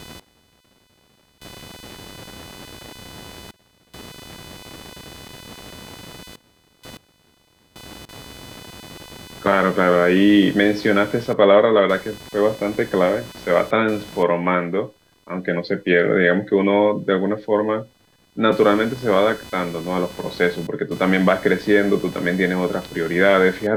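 A speech recording with computer activity noise running all the way through: a buzzy, chirping pulse somewhere around 500 Hz, sitting roughly 25 dB under the voice. It follows the machine's workload rather than the speech, as processor or graphics load shifts the shared ground under the audio circuit.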